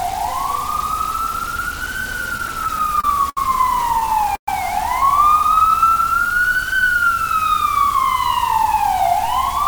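Right from the start the whole recording has a grainy, gritty edge that shifts with the sound itself, and the quiet stretches crumble or sputter rather than fading cleanly. That's low bit depth without dither. The error sits only roughly 15 dB under the signal, which fits about 5 bits, likely rounded to the nearest step with no dither to smear it out. Because the error tracks the signal instead of behaving like steady hiss, it comes across as grainy distortion on quiet sounds.

Between 2.29 and 3.38 s you get repeated stalls, a proper stutter. There are nine little hangs in that stretch, totalling about 163 ms, and the longest runs about 71 ms. Packets were showing up late, the jitter buffer kept running dry, and the receiver just held the last bit of sound until it could carry on. Nothing actually goes missing, but the audio drags and hiccups.

It happens again from 4.00 to 4.49 s, with four stalls adding up to about 154 ms. 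One of them lasts about 120 ms, long enough that the held sound fades before playback picks up again. About a third of that short span is filled-in sound, so this burst feels choppier than the first.

From 5.42 to 6.84 s there's a jitter buffer slow-down. The receiver was rebuilding its reserve by repeating tiny slices of the sound, adding about 120 ms, so that stretch plays at roughly 92% speed. The pitch doesn't drop; things just sound stretched and drawn out.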